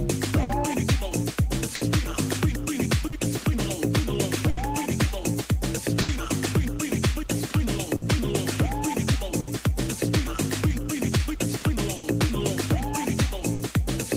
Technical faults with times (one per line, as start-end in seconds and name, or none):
0.00-14.17 clock drift between sender and receiver
0.43-6.11 scattered short gaps
7.18-13.31 repeated timing corrections
7.96-8.05 short stall from a late packet
9.40-9.50 short stall from a late packet
11.96-12.06 short stall from a late packet
13.54-13.63 short stall from a late packet